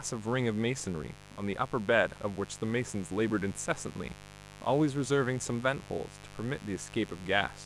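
Mains buzz runs throughout the speech, roughly 20 dB below it. Sharp switching spikes, twice per 50 Hz cycle from a dimmer, rectifier or unshielded lead, pile up harmonics into the kilohertz range, giving a steady, raspy buzz beneath everything.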